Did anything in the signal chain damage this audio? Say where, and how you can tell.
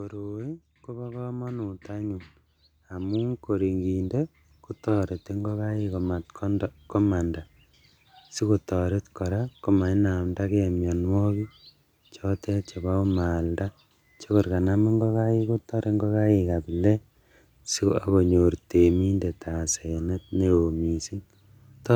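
Yes. Automatic gain rising in the call-processing stage lifts the level from 0.1 s to 4.28 s, a climb of about 15 dB. The AGC judged the input too quiet and ramped its gain up slowly, so the speech and the background noise swell together rather than the speech alone getting louder. On a waveform the envelope widens steadily across those four seconds. On a spectrogram the noise floor brightens in step with the speech.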